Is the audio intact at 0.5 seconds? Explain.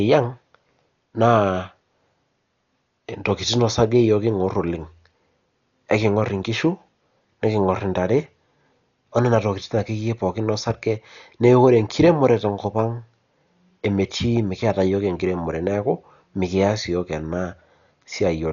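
No. At 0.5 seconds, as throughout the speech, there is Dolby Digital compression damage, likely from an AC-3 style encode at a very low rate, one that fits roughly 48 kbps. Starved of bits, the coder cut the band so nothing remains above 6.9 kHz and left many frequency lines without mantissa data, refilling them with dither noise. The result is a dull, muffled voice with a rough, fluttering grain clinging to the tonal parts.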